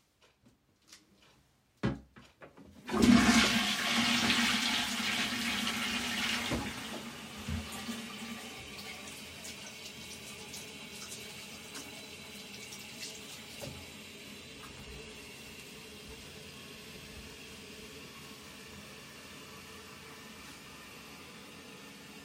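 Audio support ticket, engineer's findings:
No technical fault found on review of this everyday sound recording. Nothing further to log against this ticket.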